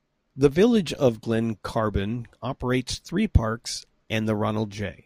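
Speech, with no technical faults audible anywhere in the recording.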